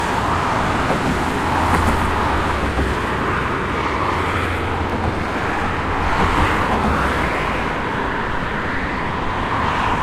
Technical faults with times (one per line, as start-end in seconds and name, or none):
2.38-2.40 overlapping chunks
4.90 overlapping chunks
7.42-7.44 overlapping chunks